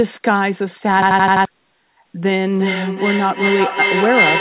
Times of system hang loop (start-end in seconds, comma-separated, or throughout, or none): 1.02-1.45